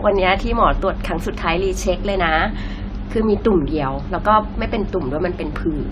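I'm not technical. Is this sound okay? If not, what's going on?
No. Generation loss runs through the whole clip, from start to finish. The speech sounds swirly, hollow and smeared, and the starts of sounds are blurred rather than crisp, with nothing at all above about 16.5 kHz. The likely cause is that the recording was saved in a lossy compressed format, opened and saved again around seven times. Each save throws away a little more detail in a slightly different place, and those losses pile up.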